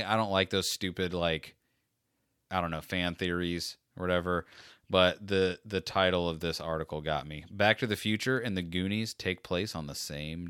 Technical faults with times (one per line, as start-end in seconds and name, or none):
none